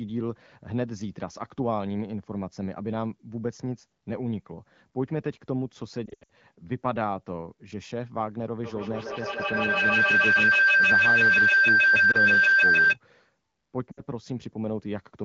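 A speech recording carried over the AMR wideband (HD Voice) codec, whose light coloration fits a rate around 12.65 kbit/s, is marred by lost AMR speech frames at 6.06–6.29 s, 12.11–12.17 s and 13.92–14.02 s. In each, the decoder stretches the last good frame with falling gain. On a spectrogram this shows as smeared, frozen harmonics fading toward blank, with a brief rough restart. The first burst drops about 180 ms across 240 ms, in runs up to 80 ms. From 8.64 s to 13.0 s, feedback howl builds as a microphone-to-loudspeaker loop gains level each trip. It reaches about 10 dB above the speech near 1.5 kHz, shown as a bright horizontal band, with the waveform envelope swelling in pulses roughly every 150 ms.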